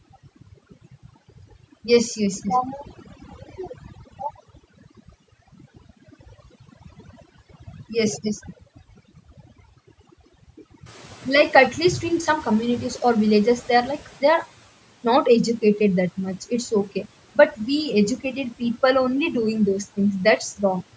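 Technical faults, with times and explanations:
Throughout: overdone noise removal. The suppressor is set too aggressively for this speech, so any frequency band sitting close to its noise estimate is pushed far down or switched off entirely. Low-level parts of the speech fall below that threshold and get removed with the noise. The gaps between phrases collapse to near silence dotted with brief tonal specks. The call microphone processing also band-limits the signal, with nothing above 8 kHz.
10.85 to 14.46 s: noise suppressor catching up. Around 11 s the room noise jumps by about 12 dB, and the suppressor's noise estimate still reflects the quieter level before it. For roughly 3.6 s the new noise passes through with less attenuation than it should, so the background is audibly louder. As the estimate adapts, the noise sinks back by about 9 dB and settles well below the speech.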